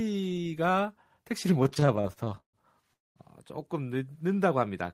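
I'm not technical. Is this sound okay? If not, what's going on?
No. From 1.63 to 2.56 s the speech keeps catching and dragging, with repeated stalls (stutter), because the audio arrived late and the receiver kept stretching the last sound to cover the waits. At 2.93 to 3.19 s the sound drops to silence for about 0.22 s, then resumes. This is a call audio freeze, likely from audio held up on its way.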